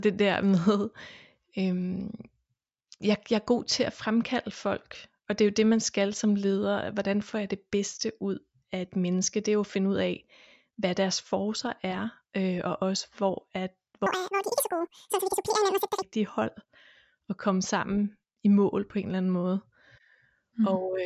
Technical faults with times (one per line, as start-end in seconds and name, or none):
14.06-16.02 wrong sample rate